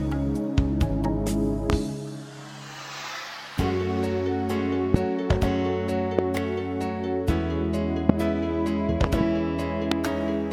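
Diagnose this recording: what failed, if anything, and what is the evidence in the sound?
Loud pops, most likely from the analogue wiring stage, such as a loose plug, an intermittent contact or static discharge. Sharp single pops land at 1.70, 4.94, 6.19, 8.09 and 9.92 s, each roughly 20 ms long, and a pair arrives in quick succession between 9.04 and 9.23 s. They peak at about 20 dB above the surrounding sound, which continues uninterrupted beneath them. Each is a voltage step or pulse added to the signal and shaped by the downstream circuitry.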